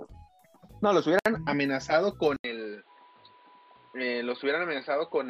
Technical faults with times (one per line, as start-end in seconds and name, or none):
1.19-1.26 gap at a join of encoded pieces
2.36-5.30 input switched to a poorer device